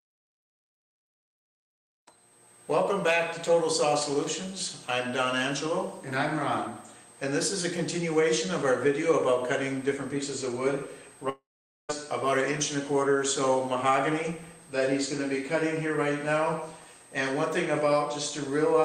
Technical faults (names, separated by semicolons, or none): long network dropout